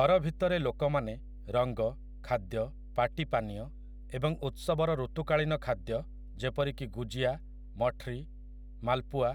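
Right from the start and running the whole way through the speech, there's mains hum: a steady 50 Hz drone with a few low harmonics, sitting only about 15 dB under the talker. A ground loop or nearby transformer is bleeding the power line into the signal.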